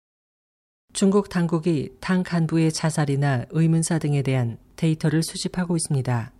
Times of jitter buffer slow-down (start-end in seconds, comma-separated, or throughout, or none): none